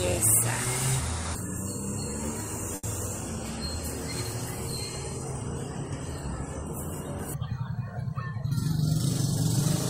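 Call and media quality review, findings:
Short stall from a late packet at 2.75 to 2.85 s: the sound gets held and smeared for a moment, with a faint buzzy sustain. This points to the jitter buffer running dry while a packet was late. The receiver stretched the last bit of audio for about 80 ms, then resumed where it left off, so nothing is actually lost. Side effect: the playout delay climbs by about 80 ms.

Jitter buffer speed-up at 8.62 to 9.41 s: the sound plays slightly rushed, at about 105% speed with unchanged pitch. Probable component is the jitter buffer draining surplus after late packets bunched up. The receiver snipped out short pitch-period chunks repeatedly, around 50 ms in total, to pull the delay back down. The result is a brief hurried feel, not a glitch.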